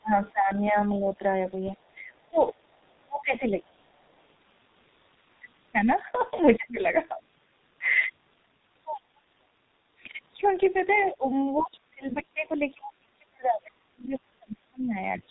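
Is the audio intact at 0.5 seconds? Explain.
No. At 0.5 s the speech sits inside a stretch from 0.01 to 1.08 s where it is pulled down in pieces, by up to about 20 dB, for roughly 0.4 s in total. The likely cause is speech suppressed in double talk: with both ends talking, the echo canceller could not tell this talker from loudspeaker echo and attenuated both. On a waveform the envelope shows abrupt, chunky dips. On a spectrogram the energy thins or vanishes in short blocks, with the upper bands going first.

The same moment also carries the heavy damage of the G.723.1 codec, which runs through the whole clip. Its 30 ms frames and slowly updated voice model make the speech muffled and hoarse, with smeared consonants, which fits a bitrate of about 6 kbit/s. On a spectrogram nothing appears above 4 kHz, and the harmonics look coarse and blocky from frame to frame.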